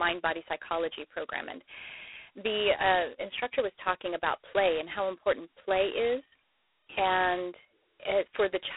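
From start to finish the speech sits inside a narrow telephone band, roughly 300 Hz to 3.4 kHz, with nothing at all above 3.9 kHz. Riding on it is the harsh, rasping hiss of G.726 ADPCM coding that rises and falls with the speech level. The codec sends only a few bits per sample describing the error of its own prediction, so quantisation noise swells on every loud syllable. The damage is heavy, which points to the 16 kbit/s mode.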